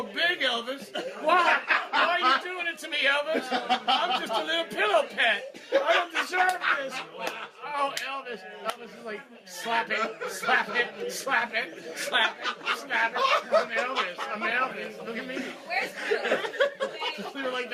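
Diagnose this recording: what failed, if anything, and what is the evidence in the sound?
Nothing failed; no fault is audible anywhere.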